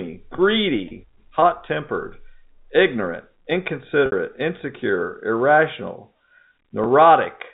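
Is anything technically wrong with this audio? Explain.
Yes. Packet loss with pitch repetition occurs three times: at 0.36–0.38 s and 6.84–6.86 s (20 ms each) and at 4.06–4.12 s (60 ms). Each time, missing data was bridged by repeating the last pitch period. The short gaps sound like a briefly held, buzzy note. The longer one fades toward silence before the speech cross-fades back in.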